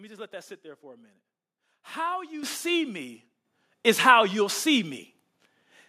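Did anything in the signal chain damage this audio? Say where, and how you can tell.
Yes. At the call-processing stage, the microphone volume stepped up twice as the software raised the device's input gain in single jumps. Speech and background rise together by about 9 dB at 2.43 s, then by about 7 dB at 3.45 s.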